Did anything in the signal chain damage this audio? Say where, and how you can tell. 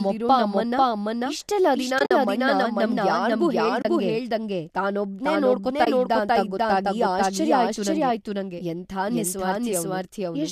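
Yes. At the capture or routing stage there is a doubled audio track: a second full-band copy, about as loud as the original, trails roughly half a second behind throughout, likely from a slower parallel path.

On the network and codec side there is AAC frame loss with muting: the decoder zeroed missing frames, leaving soft-edged holes. Scattered gaps appear at 1.99–2.11 s after "ನಮ್ಮಪ್ಪ ಅಮ್ಮನ್ನ ಇಷ್ಟೆಲ್ಲ ದಿನ", a 30 ms gap at 3.82–3.85 s, and a 20 ms gap at 5.85–5.87 s before "ಇದ್ದ ಅಂತ ಗೊತ್ತಾಗಿ ಆಶ್ಚರ್ಯ".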